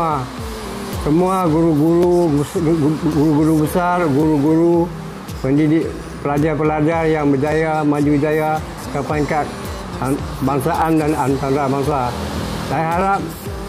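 From 0.93 to 13.01 s, regular clicks recur every 1.1 s, likely clock drift buffer slips: unsynchronised clocks several hundred ppm apart force periodic drops or repeats of a few dozen samples.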